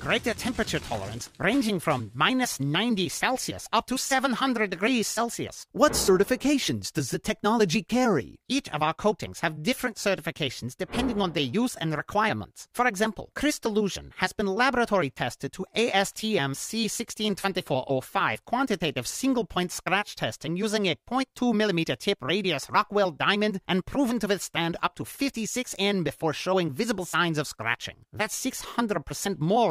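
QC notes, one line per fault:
No faults heard anywhere in the clip.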